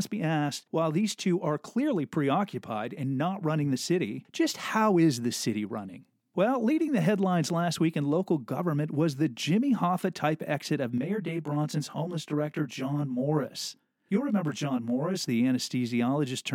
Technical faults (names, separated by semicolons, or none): channel delay (comb filtering)